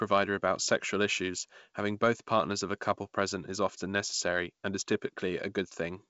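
No technical faults can be heard in this speech, which comes through G.722 wideband telephone coding at 64 kbit/s.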